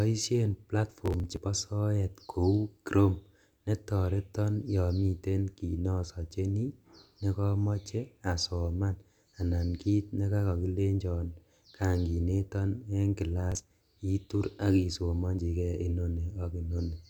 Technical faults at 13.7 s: processor overload crackle

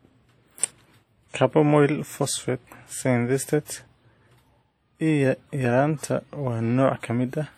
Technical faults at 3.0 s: WMA compression

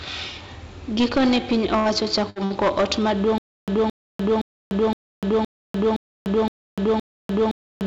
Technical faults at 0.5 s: hard clipping

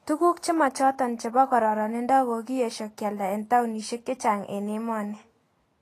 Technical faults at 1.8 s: Vorbis compression

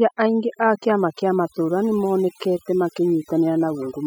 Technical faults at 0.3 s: overdone noise removal

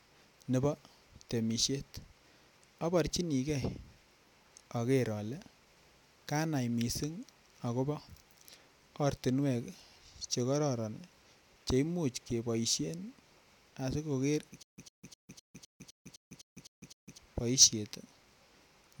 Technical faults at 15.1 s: stutter with silent gaps

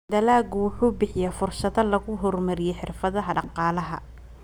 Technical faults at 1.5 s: none

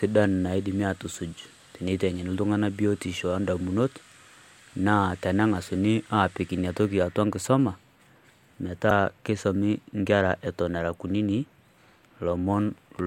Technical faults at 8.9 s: damaged data in a compressed stream

